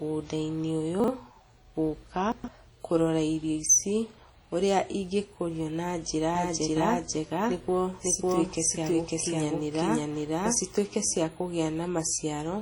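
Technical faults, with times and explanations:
Throughout: low-bitrate audio saved at a high bitrate. Coarse codec artefacts persist under a clean MP3 layer, likely from a 32 kbit/s WMA stage. The band reaches 20 kHz.
1.00–1.08 s and 2.32–2.48 s, just before "kũrora irio ici ũrĩa": chunks out of order. Segments of 40 ms play one, then three, places late, giving jumbled moments.
6.35–10.59 s, after "ũrĩa ingĩkũrio na njĩra": doubled audio track. A dry, equally loud copy trails by about half a second, starting and stopping abruptly. A second capture path is the likely cause.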